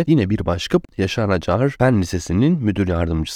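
A CD skip occurs at 0.85 to 0.89 s. A knock or disc flaw threw the laser onto a different turn of the spiral, so the player muted for about 40 ms and resumed elsewhere. The speech breaks with a short gap and carries on from a displaced point.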